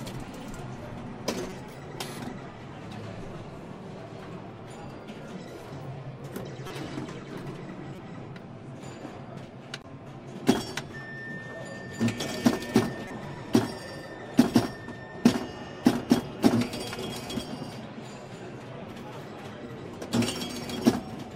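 Short blips at 1.50–1.52, 6.67–6.71, 7.96–7.99, 9.81–9.85 and 13.08–13.11 s are corrupt frames decoded. Damaged bits in two or three frames misplace energy across frequencies. A spectrogram shows brief vertical smears, and the waveform shows small, fairly quiet bursts.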